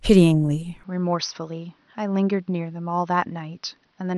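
At 0.84 s the input most likely switched to a poorer device, which stays in use to the end. Nothing above 6.1 kHz gets through, so the speech abruptly turns dull and boxy, drops a few decibels, and gains a faint new noise floor, with no gap at the change.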